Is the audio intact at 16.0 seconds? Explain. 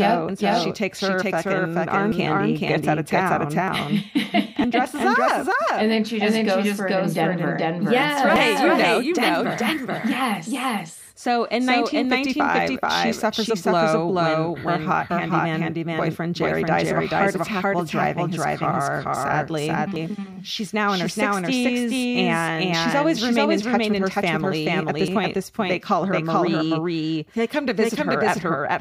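No. At 16.0 seconds, as throughout the whole clip, the speech carries a doubled audio track: a second full-band copy runs roughly 400 ms behind the original at about the same level. Because the copy has no decay or room colouring, it sounds like a crisp, distinct repeat rather than a reverberant echo, smearing each syllable into its own delayed duplicate. The likely cause is the signal being captured twice, with one path slower than the other.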